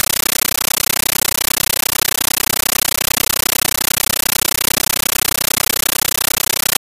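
Speech is replaced throughout by a compressed stream played as audio: an undecoded AC-3 bitstream, consistent with 640 kbps, heard as very loud chattering static. The waveform shows noise bursts of 13.3 ms repeating 31.25 times a second, separated by flat silence; the spectrogram shows matching broadband vertical stripes.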